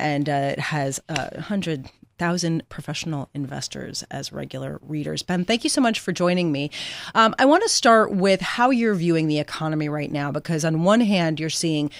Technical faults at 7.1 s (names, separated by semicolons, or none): none